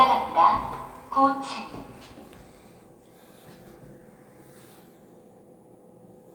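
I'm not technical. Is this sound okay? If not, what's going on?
Yes, this sound is okay, and there's nothing going on with it that needs fixing.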